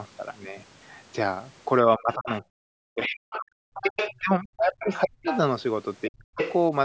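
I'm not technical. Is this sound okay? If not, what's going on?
No. There are two problems, and they come in turns.

The first is speech suppressed in double talk. From 1.96 to 3.81 s, 4.20 to 5.26 s and 6.08 to 6.40 s, the talker's voice drops away, sometimes almost to silence, and comes back in pieces. This likely happened because both people spoke at once. The call's echo remover couldn't tell the talker from the other person's voice on the loudspeaker, so it turned everything down.

The second is the other side's voice leaking through. A second, fainter voice can be heard at 3.31 to 3.38 s, 3.74 to 4.20 s, 4.86 to 5.38 s and 6.38 to 6.59 s. The brief scrap at 3.3 s is very quiet. The later ones are much easier to hear. This is likely the other person's voice, played by the talker's loudspeaker and picked up again by the microphone, because the echo remover didn't catch all of it.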